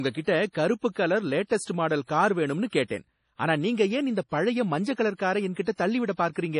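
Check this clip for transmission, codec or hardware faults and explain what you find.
Two codec faults are audible in this speech: continuous lossy-codec damage and two pre-echo events.

MP3 compression, throughout: a starved encoder, likely running near 32 kbps, removes everything above 10.6 kHz and drops weak spectral lines, making the speech sound dull, watery and swirly.

Pre-echo, at 2.88 to 2.90 s and 5.54 to 5.56 s: quantisation noise is spread across the transform block, so a short hiss precedes each attack by 27 ms and 21 ms, smearing its onset.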